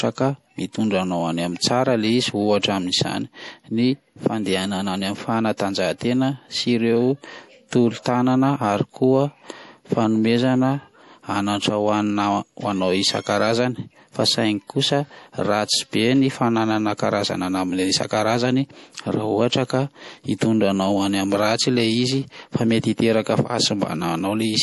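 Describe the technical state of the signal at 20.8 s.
At 20.8 s you're hearing the same thing that runs through the whole speech clip: MP3 compression damage, and it's plainly audible. Nothing makes it above 11.5 kHz, so the top end is cut off flat. The watery, swirly texture is likely the encoder starved for bits, which fits a low bitrate around 48 kbps. It drops the weak frequency lines and lets them flicker frame to frame, so s sounds chirp and attacks go soft.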